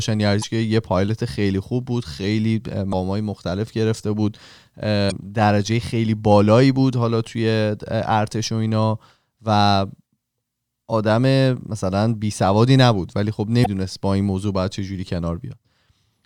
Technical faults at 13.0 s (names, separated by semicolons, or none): none